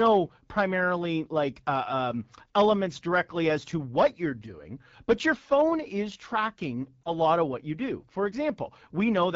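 Throughout the speech, the AMR wideband (HD Voice) codec sounds rough and raspy, consistent with an 8.85 kbit/s mode, one of its lowest rates. On a spectrogram, content stops near 7 kHz, with the 6.4 to 7 kHz band filled by smooth, featureless noise instead of harmonic detail.

From 7.04 to 7.12 s, lost AMR speech frames cause a brief dip or warble, consistent with a single lost 20 ms frame. The decoder reused the previous pitch and vocal tract settings at reduced gain. The waveform shows a short amplitude sag, and the spectrogram shows momentarily smeared, repeated harmonics.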